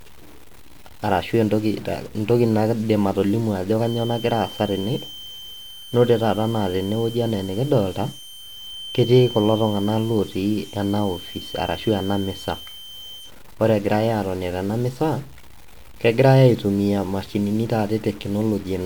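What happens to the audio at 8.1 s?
A thin, steady whistle at 3.1 kHz sits some 20 dB beneath the speech, swelling and fading slowly in level. It runs from 3.77 s to 13.34 s. This feedback whistle likely comes from a loudspeaker-to-microphone loop held right at the edge of feedback, sustaining one tone without running away.

Underneath, distortion rides on the speech and fills the pauses with a hiss-like noise. This continues throughout the clip. The cause is likely a stuck bit: one data bit frozen at a fixed value, throwing about half the samples off by a step of around -40 dBFS.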